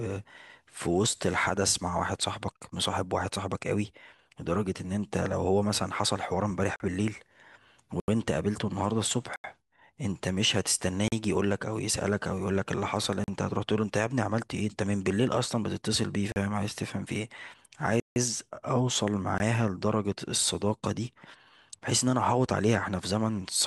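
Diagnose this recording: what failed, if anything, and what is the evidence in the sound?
The speech drops abruptly to dead silence and back eight times with no fade: 40 ms holes at 6.76, 11.08, 13.24 and 16.32 s, 80 ms at 8.0 and 9.36 s, a 160 ms gap at 18.0 s, and an 18 ms hole at 19.38 s. These are blocks of digital silence from the driver or buffer stage: the audio program missed its deadline to fill the output buffer, so whole blocks went out as zeros.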